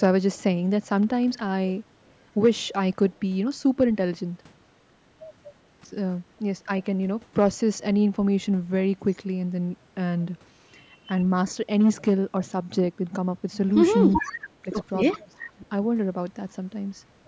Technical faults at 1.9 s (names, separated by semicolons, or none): none